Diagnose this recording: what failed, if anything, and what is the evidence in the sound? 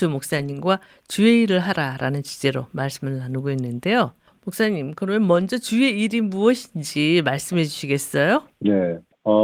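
Network packets were lost, then rebuilt by the codec from error correction: speech turns rougher and noisier, without gaps, at 0.37–0.55 s and 5.35–5.41 s.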